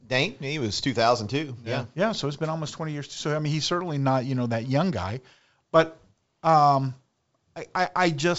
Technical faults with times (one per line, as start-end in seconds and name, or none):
none